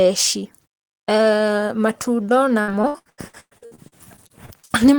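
From 0.66 to 1.09 s the speech cuts to silence for about 0.41 s, then resumes; this is a playback stall, likely the player starving for data. From 2.61 to 4.83 s, repeated packet loss leaves about twenty short holes, the longest 111 ms, patched by extending prior sound, so roughly 38% of the stretch is patched-in sound and it sounds choppy and robotic.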